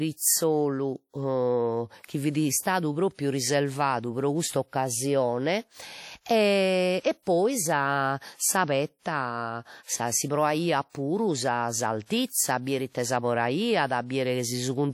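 Pre-echo at 3.14, 10.90 and 12.05 s precedes sharp onsets in this speech clip with a short hiss lasting about 47, 51 and 53 ms. A transform codec spreads quantisation noise across its whole block, so when a hard attack lands late in the block, noise scaled for that loud moment also fills the quiet gap before it, leaving each onset blurred. Throughout, the audio has a ringing, washy quality and a hiss that swells and falls with the signal. Nothing is present above 18.1 kHz. This is plainly audible codec damage, most likely from WMA compression with an early WMA encoder at a low bitrate, which fits around 48 kbps. Its long transform blocks smear quantisation noise over tens of milliseconds, and at this rate weak spectral detail is discarded rather than coded.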